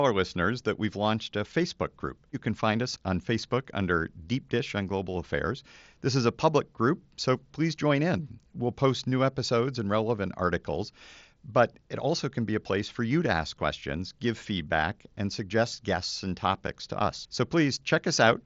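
No technical faults can be heard anywhere in this speech.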